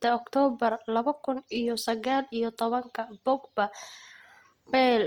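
Throughout the speech, Opus compression is likely at work. Full bandwidth reaches about 20.2 kHz, but starved bands are noise-filled, so tones sound grainy and rough, suggesting roughly 24 kbps.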